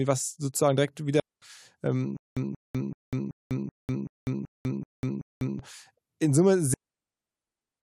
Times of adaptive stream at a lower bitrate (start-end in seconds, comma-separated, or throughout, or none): none